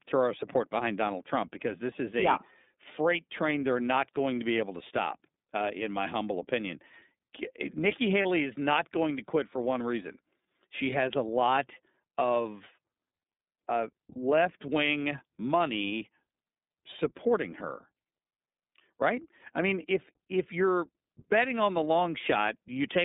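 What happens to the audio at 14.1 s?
A lost iLBC frame interrupts the speech from 14.13 to 14.16 s, a gap of about 30 ms that fits one missing 30 ms frame. The decoder fills the hole by repeating the last pitch cycle it received, blended with noise, so the dropout sounds like a brief held, slightly buzzy vowel instead of silence. Because each iLBC frame is decoded without depending on the one before, the voice is right again almost at once afterwards.

Throughout, including this moment, the iLBC codec limits the line to roughly 200 Hz to 3.7 kHz at 13.33 kbps, and its coding damage is plainly audible as a slightly rough, synthetic edge on the speech.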